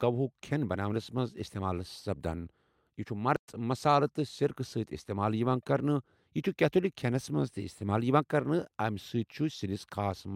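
At 3.36 s the speech cuts out abruptly and stays silent for 120 ms, resuming at 3.48 s. This is a playback stall: the player likely ran short of buffered data or had its output thread blocked, so nothing reached the output until it recovered.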